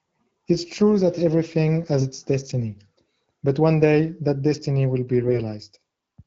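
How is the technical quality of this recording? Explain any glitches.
The recording has two short glitches from AMR bit errors, heard over the band-limited, slightly processed sound of an AMR wideband (HD Voice) codec. The codec's light coding damage is audible, and its clarity suggests one of the higher modes.

From 2.00 to 2.04 s, and again from 5.23 to 5.39 s, the speech turns hoarse and gargly. A few percent of the weakly protected bits in the codec's frames arrived flipped, so the excitation pulses and the finer pitch, gain and spectral values decode wrongly. The second burst is longer and rougher. Pitch and loudness hold steady, which separates these bit errors from lost packets, where concealment would mute the sound or smear it into a buzzy repeat.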